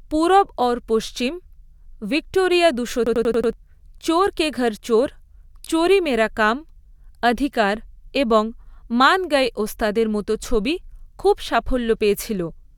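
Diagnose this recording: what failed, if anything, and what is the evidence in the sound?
System hang loop at the driver or buffer stage. From 3.07 to 3.53 s, one 93 ms slice repeats five times, a 10.8 Hz stutter.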